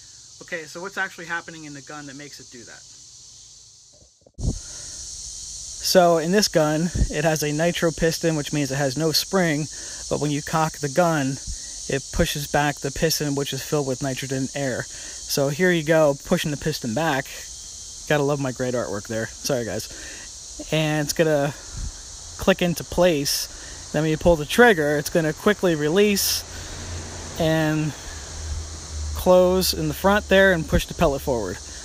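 No technical faults can be heard anywhere in it.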